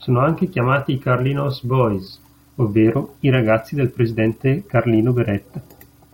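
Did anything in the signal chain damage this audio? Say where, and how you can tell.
No, nothing in the signal chain audibly damaged this speech.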